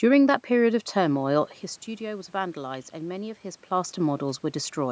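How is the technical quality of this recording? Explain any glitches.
There's one real glitch: a steady run of faint ticks through nearly the whole clip.

Those are clock slip clicks, from about 0.16 s to 4.81 s, coming roughly every fifth of a second, around thirty in all. Each one is a single sample being dropped or repeated. The likely cause is two devices running on separate, unsynchronised clocks about 100 parts per million apart, so the mismatch adds up to a full sample at that regular pace. You hear them as a light, even ticking riding on the speech.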